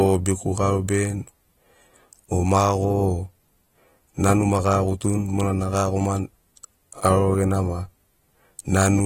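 Throughout the speech there is a dull, smeared quality. Nothing is heard above 16.7 kHz. Sibilants fizz and sustained sounds warble. This points to AAC compression, likely AAC-LC at a low bitrate near 40 kbps.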